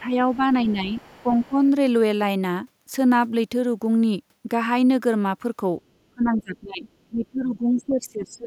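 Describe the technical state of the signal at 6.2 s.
At 6.2 s the speech is in a stretch of speech suppressed in double talk, running from 6.14 to 6.85 s, with the level pulled down by roughly 20 dB. The likely cause is an echo canceller mistaking overlapping talk for loudspeaker echo. Unlike a packet dropout, the speech is ducked rather than cut to clean silence.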